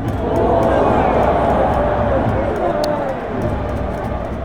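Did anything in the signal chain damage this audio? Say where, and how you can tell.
Yes. A sharp snap at 2.84 s peaks near -5 dBFS on top of the sound. It is an electrical switching spike, likely a nearby switch arcing into the analogue wiring.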